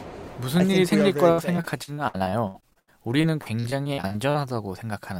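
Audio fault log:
1.31–4.36 s: repeated packet loss (robotic sound). Across this three-second stretch the audio keeps dropping out in short holes, 24 of them, the longest 80 ms. Each hole is covered by stretching the last bit of sound forward, filling about 0.8 s of the span, roughly a quarter of it. The holes come so close together that the patching never settles. The result is choppy, with pieces of the sound missing.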